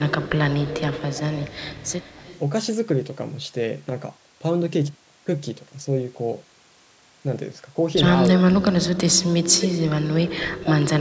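From 0.21 to 0.29 s, 0.68 to 0.81 s and 0.98 to 2.39 s, a faint delayed copy of the speech returns, about 233 then 287 ms late. This echo leak is likely residual loudspeaker echo the canceller missed.

From 2.17 to 2.27 s, the speech dips by roughly 10 dB. This is speech suppressed in double talk. Both sides overlapped, and the canceller likely turned the talker down with the echo.

From 8.39 to 8.43 s, the echo leak returns briefly, again 287 ms behind.

From 8.49 to 9.31 s, and from 9.57 s to the end, the speech is cut much deeper, by roughly 25 to 35 dB, so it nearly vanishes in places.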